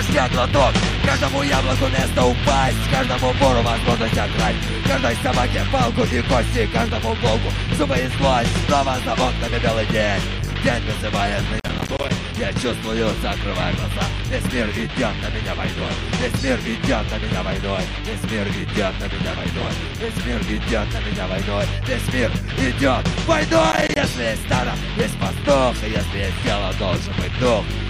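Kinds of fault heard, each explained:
Processor overload crackle: The processor fell behind on its audio work and repeatedly failed to deliver short buffers in time, which fits buffers of around 10 ms. Each missed deadline dropped a sliver of silence into the stream with abrupt edges, and these rapid dropouts merge into a gritty, tearing crackle over the sound. The first burst runs from 11.60 to 12.10 s. A shorter burst follows from 23.72 to 23.96 s.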